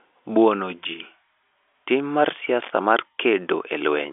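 Nothing in this speech recording stands out as a technical fault. It carries the narrow sound of G.711 telephone coding, with the band running from about 300 Hz to 3.5 kHz and nothing above about 3.7 kHz.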